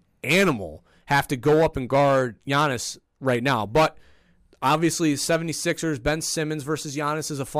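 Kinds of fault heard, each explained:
No kinds of fault are heard in this speech clip, so there are none to explain.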